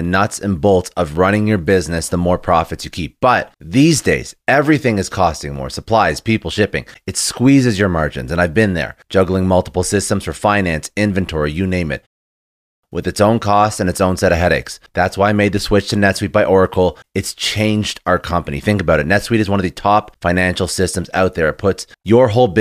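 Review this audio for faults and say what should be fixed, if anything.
The output device went idle during the 0.38 s pause after "inventory you name it" and was slow to wake and relock. That is a clipped start after a pause. About 0.47 s of speech, from 12.36 to 12.83 s, is swallowed, and the audio cuts in abruptly just before "with its own costs". Keeping the output stream running through silences, or turning off the device's idle power-saving, would prevent it.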